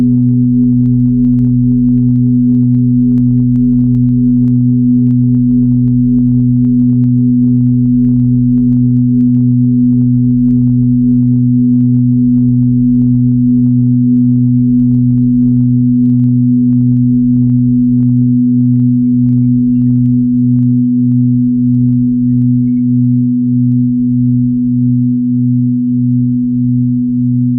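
Input gain was likely set far too high, so a fast limiter clamps every loud sound, causing gain pumping throughout: the gain swings by about 5 dB.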